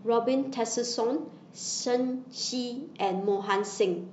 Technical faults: none

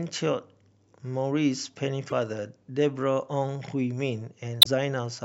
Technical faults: damaged data in a compressed stream

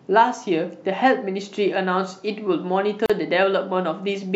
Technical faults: gap at a join of encoded pieces

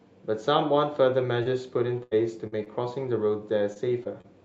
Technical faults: repeated packet loss (robotic sound)

